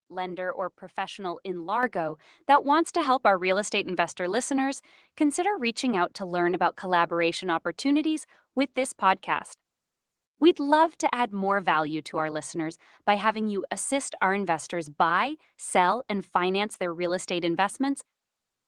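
Microphone volume stepped up at 1.83 s, just after "lender or professional in": the call software judged the microphone too quiet and raised its input volume in a single step, so the speech and the background noise jump together by about 7 dB mid-sentence.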